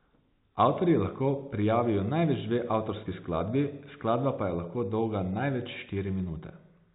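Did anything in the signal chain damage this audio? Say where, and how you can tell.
No, nothing damaged this audio.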